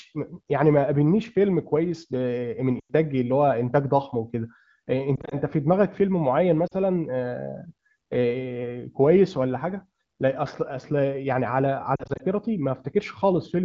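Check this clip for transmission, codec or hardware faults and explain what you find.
One transmission fault is present, on the AMR wideband (HD Voice) link: lost AMR speech frames at 2.79–2.91 s, 5.16–5.35 s, 6.68–6.74 s and 11.96–12.22 s. Frames corrupted over the radio path failed their checks, so the decoder repeated the last good pitch and vocal-tract parameters at reducing gain. The 100 ms gap at 2.79 s drops to near silence. The scattered losses at 5.16 s and 11.96 s, and the short 6.68 s gap, give brief dips and warbles before speech returns weak or rough for a moment.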